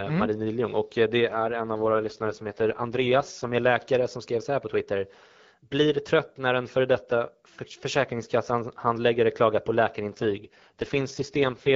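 At 1.31 s, right after "och eh det", the speech turns rough and synthetic until 3.54 s, clearing by "är läkare som skrev". It recurs from 10.09 s after "handläggare klagar på" to the end. That's an AMR rate drop: the codec stepped down from the clean HD Voice rate, to what sounds like around 6.6 kbit/s, with no gap and no lost band.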